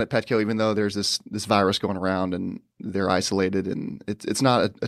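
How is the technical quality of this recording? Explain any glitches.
No glitches are audible anywhere in this speech recording, so there is nothing to report.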